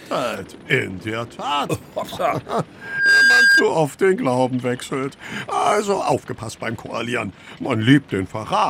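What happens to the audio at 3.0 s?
At 3.0 s you're right in the middle of a loudspeaker feedback squeal, running from about 2.80 to 3.67 s. The mic is catching its own speaker, and at 1.6 kHz the loop gain tops one, so that tone swells in roughly a third of a second to sit about 10 dB over everything else.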